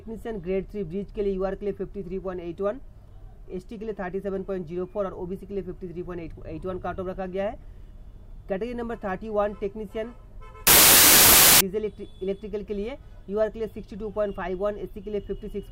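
From 10.67 to 11.61 s the audio collapses into loud noise. This is a wrong sample width fault. The sound points to samples written as 32-bit integers but read back as packed 24-bit ones. Byte boundaries slip, so most values are assembled from mismatched bytes. Only fragments keep the true top bits. The original sits buried under harsh noise, slowed to 0.75 times its speed, with pitch dropped to match.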